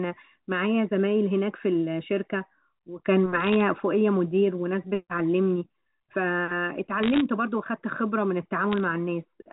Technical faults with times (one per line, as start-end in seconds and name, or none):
3.40-3.61 bit errors on a digital phone line
7.03-7.21 bit errors on a digital phone line
8.72-8.78 bit errors on a digital phone line